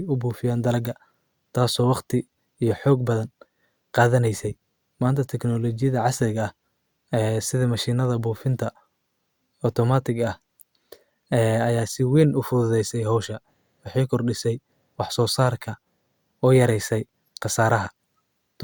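Speech recording, no technical faults detected on listening.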